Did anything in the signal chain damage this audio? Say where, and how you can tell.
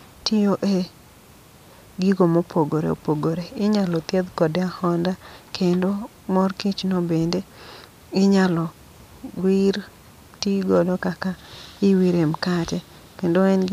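No, no damage is audible.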